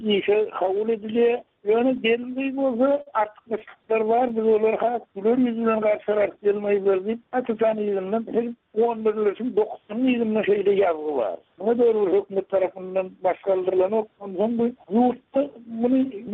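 From 1.97 to 3.09 s and again from 3.59 to 4.67 s there are repeated stalls (stutter). Packets kept showing up late, so the jitter buffer ran dry about ten times in each stretch, and the receiver stretched out the last sound to cover each gap. That adds about 128 ms in the first burst, where the longest gap is 49 ms, and about 98 ms in the second. Nothing actually goes missing, but the audio catches and drags.

Right after, from 4.62 to 6.10 s, comes a jitter buffer slow-down. With its reserve low, the receiver repeated single pitch periods to pad things out, adding 134 ms. Playback drops to 91% speed at the same pitch, so sounds come out drawn out.

From 8.04 to 9.78 s there's the opposite, a jitter buffer speed-up. The buffer had built up too much audio, so the receiver trimmed out short pitch-period pieces, roughly a fifth of a second in total. The audio runs at 110% speed with the pitch unchanged, and it sounds a bit hurried.

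Underneath all of this, the call path tops out around 12 kHz, which points to Opus at about 32 kbps.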